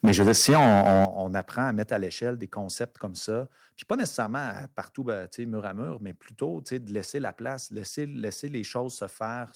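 Speech with harsh, crackling distortion on peaks from 0.04 to 1.05 s, consistent with microphone overload, likely input gain set about 12 dB too high, flattening roughly a fifth of samples. Sudden level drops at 0.05 s (about 4 dB), 1.05 s (about 11 dB) and 2.07 s (about 2 dB) fit a microphone volume stepped down, likely by the call software's automatic gain control reacting to clipping.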